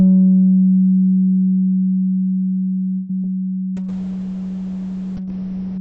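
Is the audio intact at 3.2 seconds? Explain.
No. From 2.94 to 3.16 s there is a call audio freeze, likely from packets held up so the jitter buffer ran empty. About 150 ms of the last sound is stretched into a fading buzz or hiss, then the audio resumes where it stopped. On a spectrogram it shows as a flat, smeared band that fades; on the waveform, a decaying repeated pattern.

At 3.22 to 3.24 s, short concealed packet loss follows. About 10 ms never arrived and roughly 16 ms was synthesized from the preceding sound, heard as a brief smear or wobble. It looks like a small blurred patch on the spectrogram.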